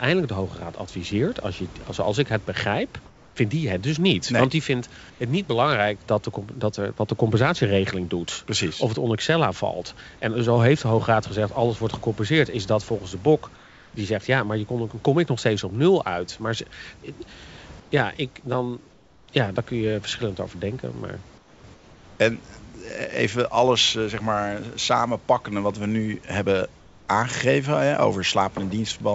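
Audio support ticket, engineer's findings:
Comfort noise in place of the background: room noise in pauses abruptly turns flat, steady and featureless, about 2 to 5 dB quieter, then the real background returns with the next sound. At 3.06–3.36, 5.10–5.20, 13.56–13.94, 17.80–17.92, 18.92–19.28, 21.38–21.64, 21.74–22.20 and 26.80–27.08 s, each gap 100 to 460 ms long. Likely cause: sender-side voice detection plus discontinuous transmission. The receiver synthesises shaped noise to fill the pauses instead of playing the actual room noise, which sits about 28 dB under the speech. Nothing is audible above 8 kHz, which fits a G.722 call path.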